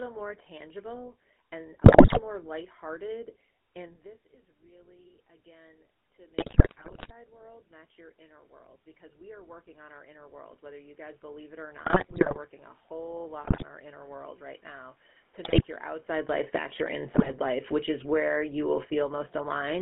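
Speech sent over a GSM full-rate codec throughout, with everything outside roughly 200 Hz to 3.4 kHz gone. The coder models the vocal tract and drives it with a sparse, regularly spaced pulse excitation, and at what sounds like its 13 kbps rate the damage is plainly audible. The voice has a buzzy, gravelly roughness and a boxed-in, narrow tone. On top of that come GSM bit errors, where corrupted bits reached the decoder and scrambled its filter, pitch and gain parameters frame by frame. They are heard as bursts of squawking, popping and gargling at 1.84–2.21 s, 6.38–7.12 s, 11.77–12.38 s, 13.44–13.64 s, 15.44–15.64 s and 17.14–17.37 s. The bursts at 1.84 s and 13.44 s are the harshest, with roughly a tenth of bits wrong. Automatic gain rising follows the input dropping by about 20 dB around 4 s, as the talker moves away from the microphone. The gain control slowly pushes its gain up by about 17 dB between 3.77 and 12.81 s, so voice and room noise swell back up together over several seconds rather than at once. 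Automatic gain falling then pulls the level down by about 9 dB from 16.1 to 19.77 s, after the talker moves around 16 s, so the sound starts loud and sinks along with its background. Two short counter-moves, automatic gain rising by about 4 dB at 16.66–17.75 s and about 3 dB at 18.28–18.66 s, make that descent uneven, with brief upward surges.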